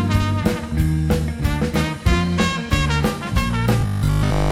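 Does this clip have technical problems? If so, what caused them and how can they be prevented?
Yes. From 3.81 to 4.51 s the sound turns hard and metallic, a rigid buzz at 50 Hz that still loosely tracks the underlying audio. This is robotic sound from repeated short buffers, likely caused by new audio arriving too seldom. The playback filled each gap by looping the last 20 ms, and most of the real audio in that stretch was skipped. A larger jitter buffer or steadier delivery would prevent it.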